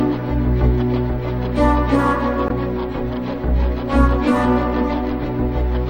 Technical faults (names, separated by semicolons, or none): damaged data in a compressed stream